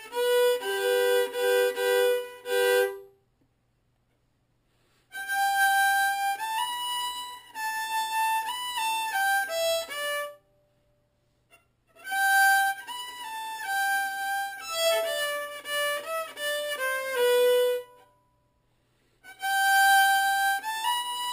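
Throughout, imaging from sample-and-hold upsampling: unsmoothed repeated samples, fitting a 12 kHz source rate, mirror the spectrum into a metallic fizz at 6 to 12 kHz, about 14 dB down.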